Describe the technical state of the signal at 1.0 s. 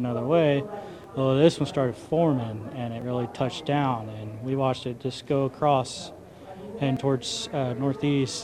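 Audio missing between chunks at 1.04 s: the sound jumps forward with no gap of silence, as if about 30 ms had been cut out and the two sides butted together, giving a brief skip in continuity. The likely cause is a recorder or processor handling audio in blocks and dropping a short stretch while closing one block and opening the next, which fits a chunk length of about 2 s.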